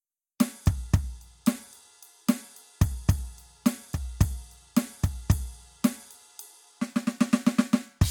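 Music, with no audible technical faults anywhere in the clip.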